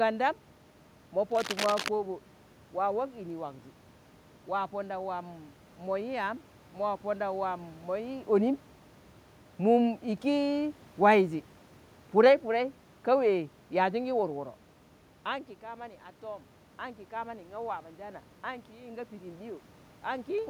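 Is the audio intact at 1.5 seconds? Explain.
No. From 1.31 to 1.89 s there is cable scratch noise: dense, uneven scratching roughly as loud as the speech, likely from a worn cable or connector whose contact resistance jumps as it moves. The waveform shows ragged, spiky bursts, and the spectrogram shows broadband vertical streaks.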